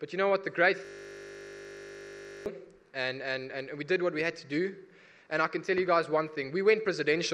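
A system hang loop runs from 0.85 to 2.46 s: the audio freezes into a steady 50 Hz buzz as one 20 ms slice repeats exactly, about 80 times, while the stalled system leaves the sound hardware cycling through the same ring buffer.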